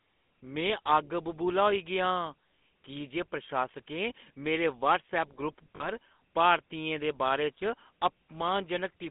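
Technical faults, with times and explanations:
Throughout, GSM full-rate codec. The speech is squeezed into a narrow band from about 200 Hz to 3.5 kHz, so it sounds thin and boxy. The codec imitates the vocal tract with a filter and feeds it a sparse train of regular pulses instead of the real signal. That coarse excitation gives the voice a buzzy, gravelly roughness that is plainly audible. The damage fits a 13 kbps full-rate coder.
5.76 to 5.86 s, lost GSM frames. For about 40 ms the voice turns into a rough, metallic ring. The decoder fills the gap by repeating the settings of the last good frame. That repeated snapshot has no natural movement, so it rings rather than speaks. The length points to two consecutive 20 ms frames dropped. The gap is short, so the sound does not fade fully to silence.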